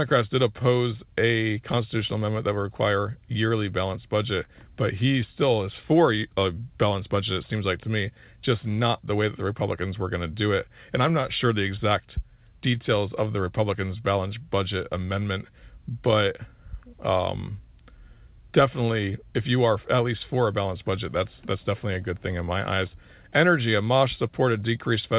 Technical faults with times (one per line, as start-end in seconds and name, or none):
0.00-25.18 clock drift between sender and receiver
0.62-24.18 repeated timing corrections
2.75-4.49 scattered short gaps